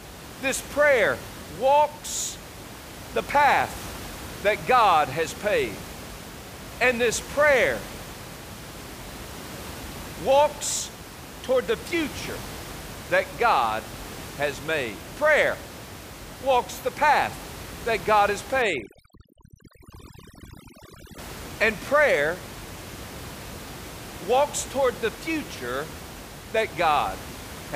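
From 18.62 to 21.18 s there is overdone noise removal: an over-aggressive reduction stage pulls individual frequency bands down whenever they sit near the room noise floor, about 16 dB below the speech. The background drops and breaks up into twinkling specks.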